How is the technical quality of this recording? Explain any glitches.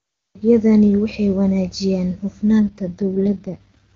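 Near the end of this wideband phone speech, the quality audibly drops.

AMR rate drop, 2.66 to 3.93 s, right after "waxay wanaajiyaan": the network pushes the AMR-WB codec to a much lower rate, which fits a switch from 23.85 to 6.6 kbit/s, trading bits for error protection. The bandwidth holds and nothing cuts out, but the speech turns rough, raspy and synthetic through to the end.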